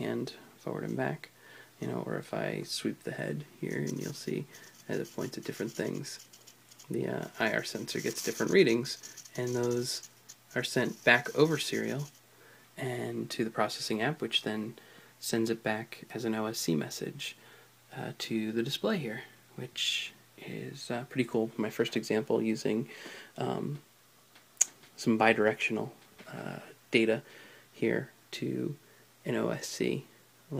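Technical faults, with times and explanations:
Nothing technical jumps out here; the audio just runs along with no faults to point to.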